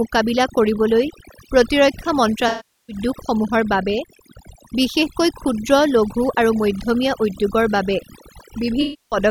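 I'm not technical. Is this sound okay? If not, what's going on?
No. A noise reduction tool was set far too strong throughout, a problem known as overdone noise removal. It shuts off any pitch range that resembles background hiss, taking quiet parts of the voice with it. The background drops and breaks up into twinkling specks.

There are also two dropouts from AAC frame loss with concealment, from 2.48 to 2.96 seconds and from 8.81 to 9.17 seconds. Chunks of the compressed audio went missing, and the player filled each gap by stretching the last good sound.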